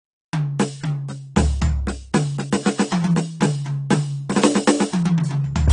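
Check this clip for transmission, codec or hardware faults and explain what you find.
There's one fault here, and it runs the whole length of the music: AAC compression damage. Nothing sits above 10 kHz, so the top end sounds dull, and sustained tones warble and smear. That's likely a low-bitrate AAC-LC encode quantising the spectrum coarsely, consistent with something near 37 kbps.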